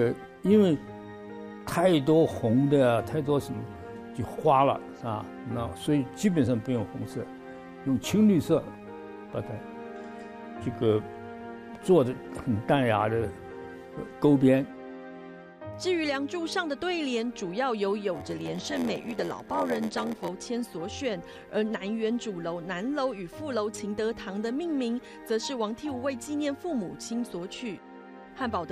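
From 18.14 to 20.28 s, a block size mismatch (padded): blocks arrive shorter than the reader expects, which fits a 512-sample block, and zeros fill each remainder. The gaps buzz at 86.1 Hz and the audio slows to 0.938 speed with pitch intact, unlike a sample-rate error.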